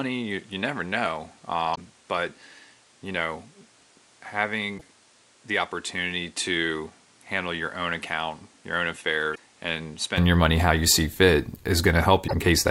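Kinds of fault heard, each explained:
Input switched to a poorer device: The recording system was most likely taking its input from a lesser microphone or a headset's call profile, then changed back to the proper input at 10.18 s with no gap. Until then the sound is dull and boxy, with nothing above about 11.1 kHz, roughly 10 dB quieter, and carrying its own background noise about 30 dB below the speech. After 10.18 s the top end and level return.
Damaged data in a compressed stream: Some frames of the compressed audio were corrupted, so the decoder misread them and lost its place until it found the next valid frame header. Each hit is brief, lasting roughly 70 to 100 ms. They occur at 1.71 s, 4.74 s, 9.31 s and 12.24 s, breaking into the speech.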